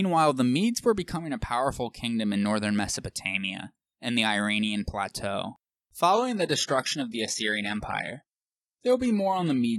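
Adaptive stream at a lower bitrate from 6.13 s onward: the player switches to a thinner version, abruptly cutting treble above 11.8 kHz with no gap, consistent with a 16 kbit/s stream.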